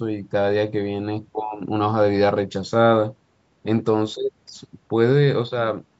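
No technical faults occur anywhere in this speech recording.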